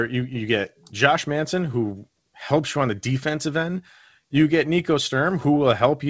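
Clock drift between sender and receiver runs throughout. The sender's clock runs around 2% slow, so the jitter buffer keeps draining and the timing never settles. From 1.14 s, just after "you you get", to 6.05 s, the receiver makes repeated timing corrections, padding in short repeated pieces that add about a tenth of a second. This leaves the speech at 98% speed, heard, if at all, as faint hiccups and a slightly dragging, uneven tempo.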